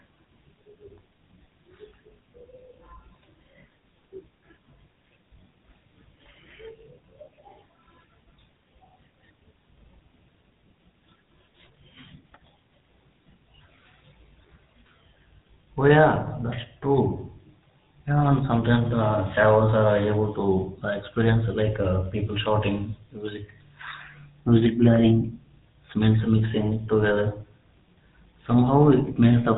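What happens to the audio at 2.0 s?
At 2.0 s the speech carries the buzzy, gravelly roughness of the GSM full-rate codec, present throughout the clip at a rate that fits 13 kbps. Because it rebuilds the voice from a vocal-tract model driven by sparse, regularly spaced pulses, it sounds rasping rather than merely muffled. That grit sets it apart from simple band-limiting, though nothing passes above 3.8 kHz.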